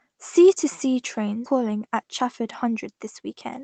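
At 1.45 to 1.47 s there is a skip ahead. Roughly 0.7 s of speech never plays. It was dropped in transit or discarded by an overfull jitter buffer. Playback jumps straight forward, and the two sides are butted together with no silence filling the break.

From 1.55 to 3.58 s comes a jitter buffer speed-up. The buffer was holding too much audio, so the receiver kept trimming short pitch-period slices, roughly 150 ms in total. Speech runs at about 107% speed at unchanged pitch and sounds hurried.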